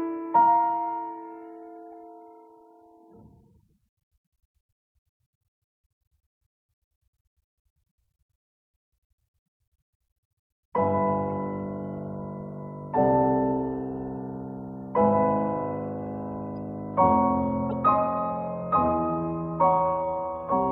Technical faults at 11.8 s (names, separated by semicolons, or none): none